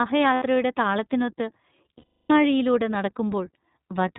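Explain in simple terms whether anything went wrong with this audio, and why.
Yes, two things went wrong with this speech.

The whole clip has passed through the iLBC codec, a narrowband voice codec used for internet calls. It throws away everything above 4 kHz, so the voice sounds thin and muffled, like a phone line. Its damage is plainly audible: the voice has a rough, slightly synthetic edge. That edge is what sets it apart from a simple telephone-style filter, which would muffle the sound without making it grainy.

There are also lost iLBC frames, at 0.34 to 0.44 s and again at 1.98 to 2.32 s. Chunks of audio never arrived, about 80 ms the first time and 320 ms the second, which fits several 20 ms frames going missing in a row. The decoder filled each gap by repeating the last bit of voice with some noise mixed in, so you hear a held, buzzy, vowel-like sound rather than silence or a click. 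The longer second gap fades as it goes on. The voice comes back cleanly right after each gap.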